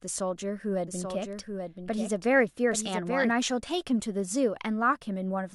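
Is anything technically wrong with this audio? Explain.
Yes. From 0.87 to 3.31 s, a second, somewhat quieter copy of the speech trails about 0.7 s behind, starting and stopping abruptly: a doubled audio track, likely from a duplicated capture path.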